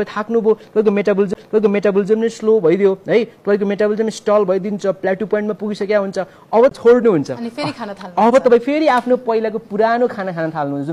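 The laser lost its track on the disc and landed on a different turn of the spiral, a CD skip, at 1.34 s and again at 6.69 s. Each time the player drops out for a moment, around 15 to 20 ms, with a tick, and the sound resumes abruptly from another point.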